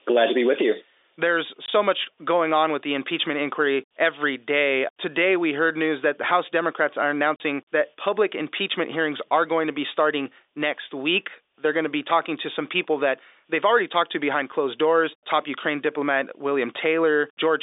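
Packet loss filled with silence cuts the speech twice. At 1.66 to 1.68 s, just before "much going on with", a 20 ms hole drops out, and at 7.36 to 7.40 s, before "that public impeachment hearings", a 40 ms hole does the same. This fits one and then two lost 20 ms packets replaced by silence. Each gap has abrupt edges, shows as a flat line in the waveform, and appears on the spectrogram as a blank vertical stripe across the narrow telephone band.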